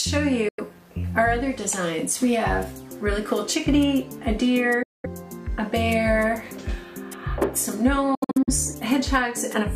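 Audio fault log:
0.48–0.60 s, 4.83–5.06 s, 8.15–8.49 s: Bluetooth dropout. The audio cuts out and resumes further along, as if it had kept playing unheard. This is likely from packets arriving too late at the headphones and being discarded. The first two gaps are single holes of about 93 ms and 209 ms. The third is broken into several short gaps, the longest about 70 ms, that together lose about 209 ms. On a waveform and spectrogram these appear as blank vertical bands with sharp edges or very brief fades.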